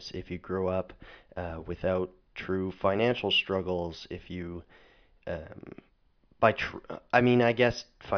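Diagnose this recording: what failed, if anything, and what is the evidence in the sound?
Nothing failed in this recording.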